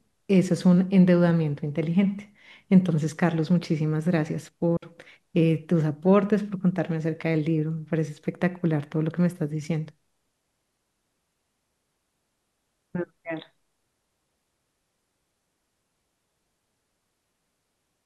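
At 4.77 s there's a digital wireless dropout: the link loses data, the receiver mutes for 60 ms, leaving a clean silent hole without any noise burst.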